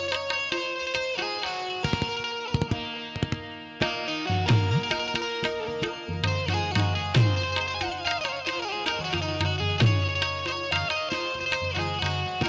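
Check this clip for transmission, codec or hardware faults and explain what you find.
No transmission, codec or hardware fault can be heard here, and the signal comes through with its level, timing and frequency content intact.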